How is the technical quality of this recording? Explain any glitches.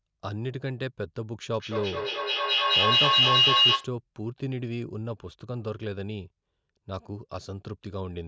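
The recording has one real problem: a stretch of feedback howl in the speech.

From 1.59 to 3.98 s you get a feedback howl. Two devices in the same room on one call create a mic-to-speaker loop that adds gain on each pass, so instead of dying away the repeats keep climbing and narrow to a whine around 3 kHz. The loop's trip time is roughly a fifth of a second, and the howl peaks about 11 dB above the speech before it stops.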